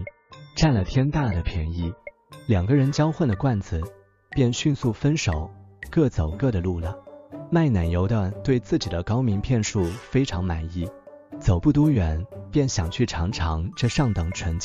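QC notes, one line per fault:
0.00–2.00 s, adaptive stream starting at a low bitrate: nothing above 7 kHz and stronger codec artefacts, which fits a very low-bitrate AAC version, then a sudden step up to a 96 kbit/s version with no gap. Unlike a dropout or fade, nothing is lost at the switch; the player simply moves to a better version once it has measured the connection.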